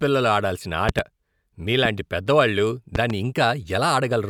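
Speech with loud pops jumping well above it: doubles at 0.89–1.01 s and 2.95–3.12 s, a single at 1.85–1.88 s, likely static or switch glitches.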